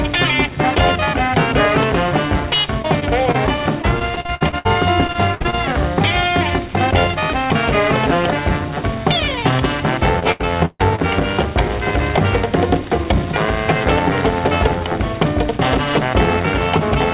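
Audio from a call path is damaged by packet loss. The band stops at 4 kHz, which fits 64 kbps G.711 mu-law coding. First comes short concealed packet loss, at 2.82–2.86 s, 3.00–3.03 s and 3.31–3.36 s. About 20 ms of audio failed to reach the decoder each time, and the receiver patched the hole by extending the preceding sound before blending back, leaving a brief smear or wobble where a short sound can vanish. Then the network falters repeatedly, giving repeated packet loss (robotic sound) from 3.82 to 4.67 s (8 gaps, longest 63 ms, roughly a third concealed), 5.07 to 5.54 s (6 gaps, longest 57 ms) and 10.20 to 11.00 s (4 gaps, one lasting 140 ms). Each patch is cut short by the next loss, so these stretches turn choppy, with pieces missing.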